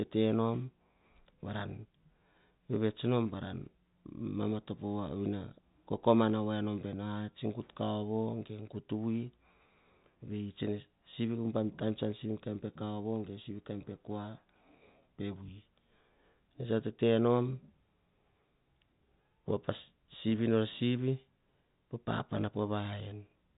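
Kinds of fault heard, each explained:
No faults are audible in this telephone-band speech.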